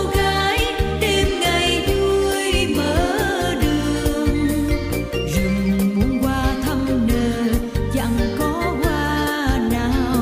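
No technical faults can be heard anywhere in this audio.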